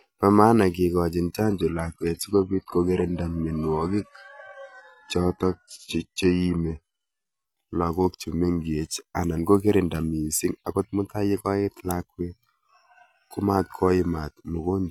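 The adaptive stream fell to a lower bitrate from 1.45 to 7.45 s, after "maana kikochin": nothing above 11.8 kHz, rising codec artefacts, switching back abruptly without gaps before "lagok chemenkech anan kokirinda".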